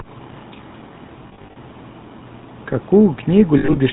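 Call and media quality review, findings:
GSM full-rate codec, whole clip. Speech buzzy and gravelly, damage plainly audible. Nothing above 4 kHz. Vocal-tract filter driven by regular pulse excitation, only every third excitation sample kept. Sound fits 13 kbps full rate.

Lost GSM frames, 1.28–1.57 s and 3.58–3.80 s. Rough metallic ringing where the decoder reuses the last good frame's parameters. First span: about 180 ms missing across 280 ms, gaps no longer than roughly 40 ms. Second: 120 ms across 220 ms, longest gap under a tenth of a second.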